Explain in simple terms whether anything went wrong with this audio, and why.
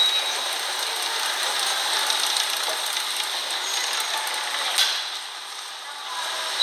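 Nothing went wrong here; there are no audible technical faults anywhere in the recording.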